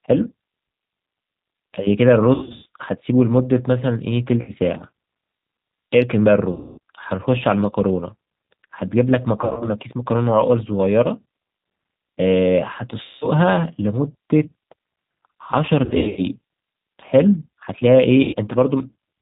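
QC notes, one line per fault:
Throughout, G.729 codec: the audio sounds rough, slightly synthetic and muffled, with nothing above 4 kHz. An 8 kbit/s coder rebuilds it from a vocal-tract filter, pitch predictor and sparse pulses.
2.34–2.66, 4.42–4.52, 6.52–6.78, 9.41–9.69, 13.03–13.28, 15.85–16.22 and 18.23–18.35 s, VoIP packet loss concealed by the speech codec: the sound smears into a fading buzz as the decoder extrapolates its last pitch and filter across 60–260 ms of missing audio.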